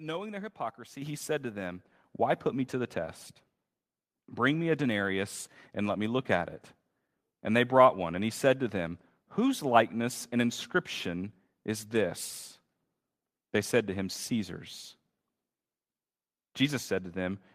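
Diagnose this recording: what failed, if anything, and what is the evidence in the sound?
The level jumps twice: about 6 dB at 1.02 s, between "knowing their hypocrisy" and "he said to them", then about 5 dB at 2.04 s, just after "he said to them". Voice and background rise together. This is the microphone volume stepped up by call processing, which judged the input too quiet and raised the device gain in single steps.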